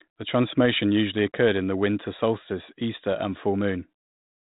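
There are no technical faults to describe at any point; the speech is simply narrowband telephone audio with nothing above 3.8 kHz.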